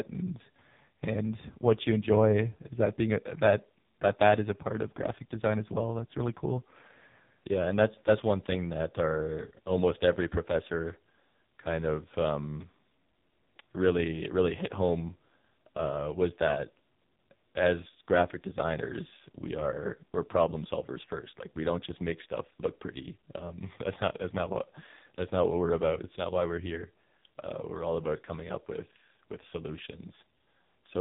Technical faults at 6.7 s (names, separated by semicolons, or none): AMR narrowband mobile codec